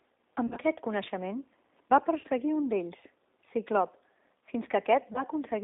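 A short speech recording that sounds like it went through a G.729 codec the whole way: the band sits roughly between 250 Hz and 3.7 kHz, nothing gets above that, and the voice has that slightly rough, synthetic edge you get when speech is rebuilt from a filter, a pitch predictor and a few pulses per frame. That fits G.729A at around 8 kbit/s, and the damage is plainly audible. On top of that there's VoIP packet loss concealed by the speech codec in three places. From 0.47 to 0.59 s, just before "coneixement va", about 70 ms of audio goes missing in scattered gaps over 100 ms, with the longest run around 40 ms. Around 2.20 to 2.26 s, between "coneixement va" and "un d'ells", 40 ms goes missing. Near 5.13 to 5.23 s, a brief 20 ms gap. In each spot the decoder keeps extrapolating from the last pitch and filter while turning the gain down, so the sound smears into a buzzy tone or coloured noise that fades, and it stays weak or distorted for tens of milliseconds after packets return.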